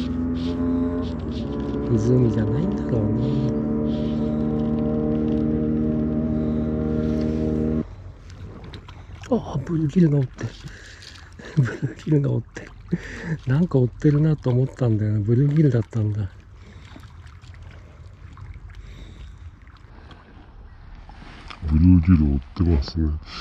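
From 19.90 s to the end at 23.40 s, a section at the wrong speed runs at 0.727 times normal, sounding slow and roughly five semitones deeper. Pitch and tempo drop together, unlike a time-stretch or pitch shift, pointing to a likely clock mismatch.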